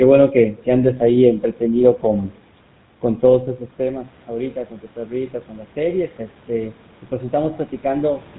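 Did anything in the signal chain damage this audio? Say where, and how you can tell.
Yes. The GSM full-rate codec damages the whole clip. Speech has the buzzy, gravelly roughness of a coder that models the vocal tract and excites it with a sparse, regularly spaced pulse train, and nothing is left above about 3.9 kHz. The coarseness is plainly audible and fits a 13 kbps GSM full-rate link. That places the damage at the codec stage of a call path.

Automatic gain rising, from 3.01 s to 8.28 s, is a call-processing fault. Around 3.0 s the talker moves away and the input drops by about 13 dB. The gain control then lifts its gain gradually by about 6 dB over the following five seconds. Voice and room noise swell together, which marks this as gain applied to the whole signal and not a change at the source.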